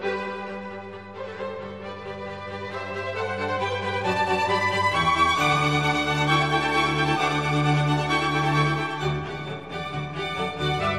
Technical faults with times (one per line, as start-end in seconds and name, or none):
none